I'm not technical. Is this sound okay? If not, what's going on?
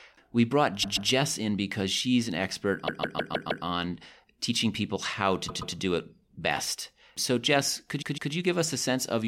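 No. This speech has repeated frames: a short chunk of about 0.13 to 0.16 s plays again, causing stutters at 0.82, 2.86 (repeated five times), 5.47 and 8.01 s.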